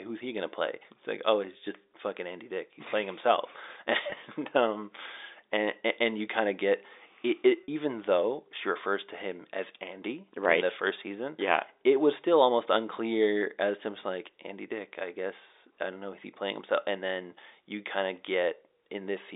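At 4.10 to 4.12 s and 7.64 to 7.68 s, packet loss with pitch repetition briefly holds the speech in a buzzy sustain, not a silent gap or click. The gaps are about 20 ms and 40 ms, which points to one and then two lost packets, each bridged by repeating the last pitch period. All of this sits within the 300 Hz to 3.7 kHz band of the G.711 telephone line.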